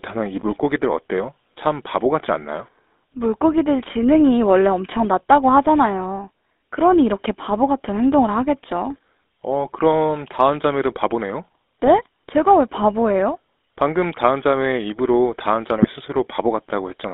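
From start to finish the speech carries the sound of the GSM full-rate codec. Everything sits between roughly 250 Hz and 3.7 kHz, and the voice has the codec's gravelly, buzzy grain, plainly audible throughout. The coder rebuilds speech from a vocal-tract filter driven by a sparse train of regular pulses, discarding most of the excitation detail, which fits a 13 kbps rate. That regular pulse texture sets it apart from a plain band-limited phone line, which would sound muffled but smooth.

At 11.84 s, for about 70 ms, GSM bit errors break through. Corrupted bits reach the decoder, so for a moment the filter, pitch or gain values it applies are wrong, and the voice briefly squawks and gargles. The length suggests about three damaged frames. A second burst at 15.76 s lasts about 100 ms, consistent with around five frames and an error rate near 1.3 percent. Unlike a dropout, the sound does not go silent. 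It turns into distorted, wrongly shaped noise.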